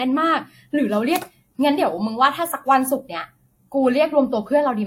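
Throughout the speech, the top end stops sharply at about 16.7 kHz, and two different kinds of coding artefact sit together. This is likely transcoding between lossy codecs, consistent with a WMA stage followed by a lower-rate Vorbis encode that spends bits re-coding the first codec's damage.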